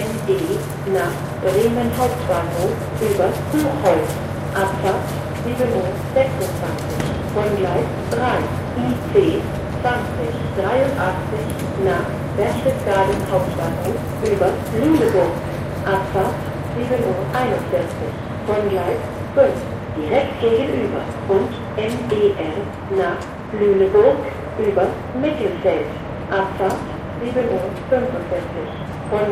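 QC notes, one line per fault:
No faults heard across the sound.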